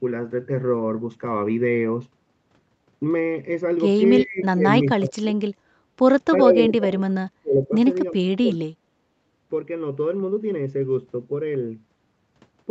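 At 4.16 to 4.21 s a brief, faint scrap of delayed sound appears, likely an echo leak: the far end's loudspeaker fed its microphone, and its echo canceller let a remnant through, arriving about 360 ms after the original and about 20 dB below the main speech. On a spectrogram it shows as a thin, weak repeat of earlier harmonic structure, sitting under the 8 kHz ceiling set by the call's Opus path; the waveform barely shows it.

Right after, at 4.23 to 4.65 s, 4.95 to 5.38 s, 6.39 to 7.75 s and 8.12 to 8.62 s, the speech sinks sharply, by roughly 30 dB and up to about 35 dB in the longest stretch. This is speech suppressed in double talk, likely from the canceller mistaking overlapping talk for echo and clamping down on both. It sounds like the voice ducking away or breaking into pieces. The waveform shows hollowed-out envelopes, and the spectrogram shows the energy fading across the band.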